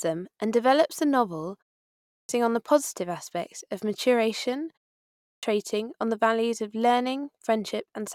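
Speech with a clipped start after a pause: following gaps of about a third of a second, onsets at 1.87 s and 5.03 s lose roughly 0.4 s as the sleeping output wakes, unlike muted pauses, which drop background only.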